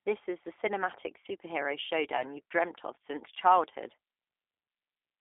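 Speech heard through G.729 coding, which sounds slightly rough and synthetic throughout, with plainly audible codec damage. The low-rate decoder rebuilds each short frame from a vocal-tract filter and a few pitch pulses instead of the real waveform, which fits an 8 kbit/s G.729A stream. On a spectrogram, energy sits in a telephone band from about 300 Hz to 3.6 kHz, with nothing above it. Harmonics look smeared and grainy rather than cleanly striated. A gap from VoIP packet loss concealed by the speech codec falls between "is the cinematic superhero" and "you've dreamt of since", from 2.16 to 2.25 s. About 30 ms of audio goes missing, which points to a single lost packet. The decoder fills it by repeating its last pitch and filter at falling gain, so the sound is briefly stretched into a fading buzzy tone or coloured noise. Because each frame builds on the previous one, the voice stays weak or distorted for tens of milliseconds after 2.25 s. 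A waveform shows a short run of shrinking, stretched-out sound there. On a spectrogram, the stretched energy fades out before normal speech structure returns.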